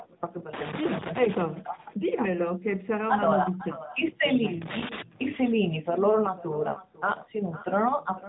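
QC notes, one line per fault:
Throughout, echo with no canceller: each phrase returns roughly half a second later, about 16 dB quieter, as a distinct repeat rather than diffuse room reverb.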